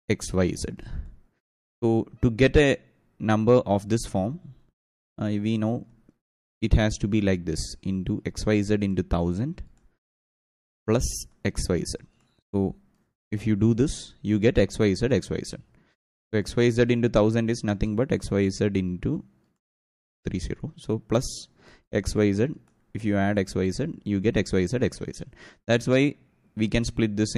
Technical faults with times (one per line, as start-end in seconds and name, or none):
20.23-20.25 pre-echo